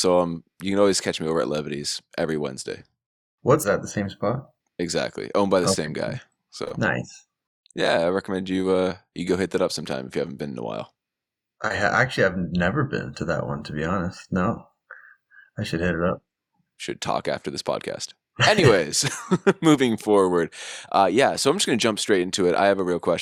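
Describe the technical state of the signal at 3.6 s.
At about 3.63 to 3.67 s the speech jumps ahead abruptly with a short blip, landing on "the same spot". That's a stream segment skipped: most likely one chunk of the stream failed to load and playback carried on from the next, dropping that stretch.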